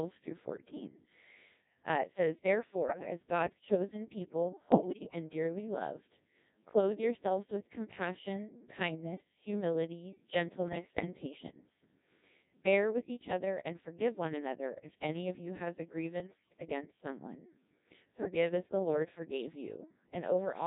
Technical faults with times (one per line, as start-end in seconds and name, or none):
0.00-20.66 Codec 2 vocoder
2.88-3.10 bit errors on digital voice radio
4.72-5.15 bit errors on digital voice radio
10.68-11.06 bit errors on digital voice radio